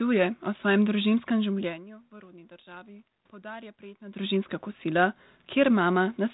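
No technical faults heard.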